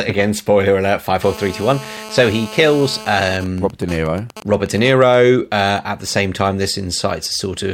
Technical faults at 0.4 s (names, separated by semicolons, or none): none